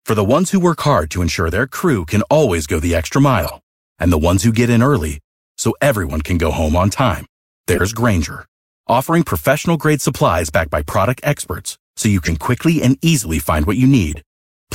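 Speech clip with corrupt frame decoded faults: damaged compressed frames played anyway, giving short chirps and noise bursts at 3.38–3.55 s (after "always go the extra"), 5.73–5.77 s, 7.75–7.81 s (after "go home on time"), 10.89–10.92 s, 12.23–12.28 s (between "experts so you" and "quickly and easily find") and 14.10–14.16 s. Most are loud. The one at 5.73 s is faint.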